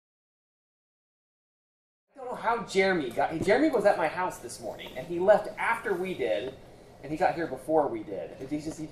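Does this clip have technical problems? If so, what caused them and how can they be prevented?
No, there are no technical problems to point to here. The sound fades in smoothly from around 2 s and reaches full level at 2.62 s, with no click or hard edge at the start.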